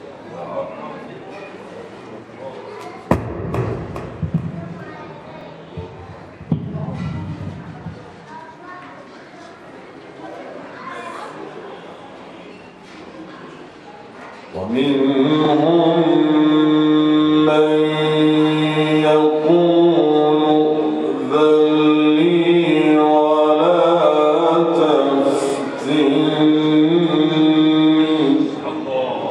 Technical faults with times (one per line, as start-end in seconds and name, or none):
5.41-5.45 overlapping chunks
15.45-15.50 overlapping chunks
25.50-25.54 overlapping chunks